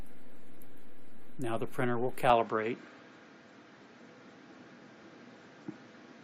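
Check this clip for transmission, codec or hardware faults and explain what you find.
One fault: from 2.30 s to the end, the sound loses its top and takes on a different character, with nothing above 7.6 kHz. This is most likely an input switched to a poorer device, a narrower-band microphone path replacing the first one. There is no gap at the switch and no level jump, but a new, faint background noise appears, roughly 40 dB down. That change of noise floor and tone sets it apart from a simple codec bandwidth reduction.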